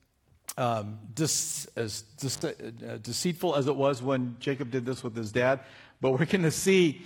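A speech recording with two faults. At 2.34 s an intermittent contact drops the sound for about 64 ms, until 2.42 s. Crackle marks both edges. Faint hiss remains while the loose cable or plug is open. From 3.50 s to the end, the adaptive stream switches to a lower bitrate. The change is sudden, with no gap. Nothing remains above 12.3 kHz. The upper treble is cut off, and codec artefacts rise. This points to a drop from a high-quality stream to a low-bitrate HE-AAC-style version, because the connection slowed.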